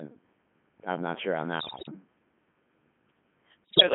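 Throughout this speech clip the voice sounds robotic and buzzy, squeezed into a narrow band from about 150 Hz to 3.4 kHz, with a synthetic quality. This is the Codec 2 vocoder at work. Rather than carrying the waveform, it transmits only pitch, voicing, energy and a coarse spectral envelope, and the decoder rebuilds the voice from sine waves. The heavy damage fits its 3.2 kbit/s mode. Twice the sound breaks into warbling, bleeping gibberish, with sudden jumps in pitch, loudness and tone colour. The first burst runs from 1.60 to 1.91 s, right after "I'm not sure on", and the second from 3.64 to 3.82 s. These are bit errors on digital voice radio. Around one bit in ten arrived flipped, and because each bit in such a low-rate stream sets the pitch, level, voicing or spectrum of an entire frame, whole frames come out wrong and the synthesiser produces nonsense.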